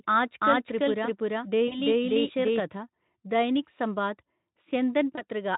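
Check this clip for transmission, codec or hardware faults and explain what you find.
Two kinds of fault are present: a doubled audio track over the first part of the speech, and two short dropouts covered by the codec's packet loss concealment.

Doubled audio track, from the very start to 2.6 s. The speech is already playing twice when the clip begins. A second, full-band copy trails the first by roughly 300 ms at about the same loudness, with no reverberant tail or room colouring. It likely comes from the signal being captured again through a slower path. At 2.6 s the trailing copy cuts off abruptly, leaving a single track.

VoIP packet loss concealed by the speech codec, at 1.68 to 1.79 s and 5.15 to 5.24 s. About 40 ms of audio went missing in the first gap, consistent with two 20 ms frames, and about 20 ms in the second. The decoder filled each gap by extending its last pitch and spectral shape at falling gain, so the speech smears into a fading buzzy tone or coloured noise. 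It stays weak or distorted for tens of milliseconds or more after packets resume. The Speex coding at 18.2 kbps adds at most faint hoarseness.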